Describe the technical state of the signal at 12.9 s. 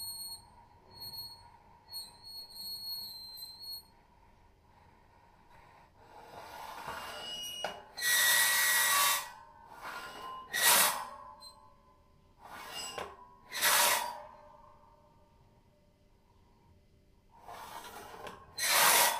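At 12.9 s the signal is intact, with no audible technical fault at that point.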